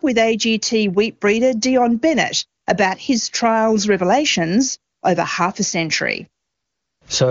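At 2.61 to 2.65 s, 4.93 to 5.01 s and 6.43 to 7.01 s, AMR comfort noise replaces the real background: speech frames stop, and the receiver fills each 40, 80 and 580 ms gap with smooth synthetic noise that switches in and out.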